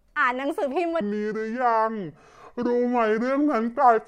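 A section at the wrong speed runs from 1.01 s to the end of this speech clip. From that point the audio plays at 0.651 times its recorded rate, so the voice drops by roughly seven semitones and everything drawls out, deeper and slower, with pitch and tempo falling together in one step. The likely cause is an editor or player fitting that stretch of audio to the wrong clock.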